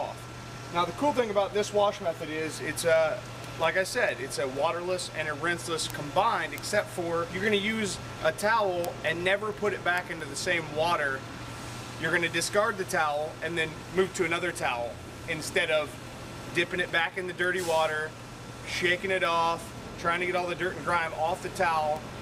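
From 0.24 s to 22.19 s there are word clock ticks, sharp clicks about every fifth of a second, where an unlocked receiver clock, off by roughly 100 ppm, slips a sample.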